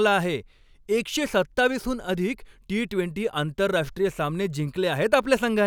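No technical fault can be heard anywhere in this speech recording. There is nothing to place at any moment in the audio and no value to report.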